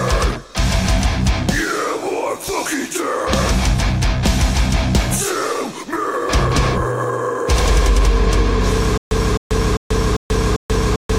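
At 8.98 s the audio breaks into a stutter with silent gaps, and it stays that way to the end. A fragment of about 261 ms plays, then drops to digital silence for about 136 ms. The same fragment returns five times, once every 397 ms or so. The likely cause is a stalled player or stream that replays its last buffered fragment at each retry and then runs dry. Whatever should have played here is simply missing.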